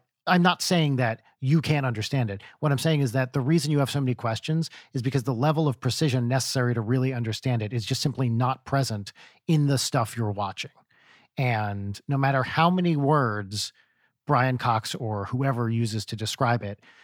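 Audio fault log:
No technical faults can be heard anywhere in the speech recording.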